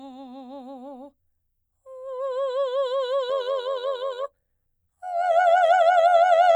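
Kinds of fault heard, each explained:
Overlap-add ripple: the music was rebuilt from windowed frames that overlap unevenly, so from 3.3 s to the end the level swings by about 6 dB roughly 100 times a second, a buzzy, robotic flutter far faster and more mechanical than a musical tremolo.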